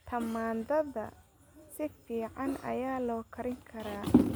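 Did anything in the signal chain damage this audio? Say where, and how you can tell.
No, nothing along the chain audibly damaged this speech recording: the signal holds steady level and continuity throughout, with no audible break, distortion or disturbance at any stage.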